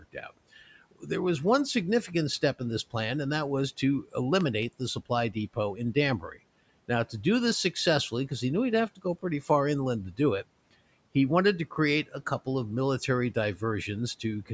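Speech recorded through a call microphone chain has two kinds of fault. Speech cut by the noise suppressor appears from 0.0 to 0.31 s and again from 6.2 to 6.4 s. Each time, roughly a tenth of a second of sound sinks by about 12 and about 14 dB, turned down together with the background rather than breaking off abruptly like a dropout. A loud pop, heard as two pops in quick succession between 4.41 and 4.65 s, stands roughly 10 dB above the speech while the speech carries on underneath without a gap; a plug, switch or static discharge is the likely cause.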